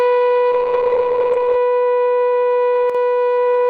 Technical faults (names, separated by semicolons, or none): call bitrate drop; one channel drops out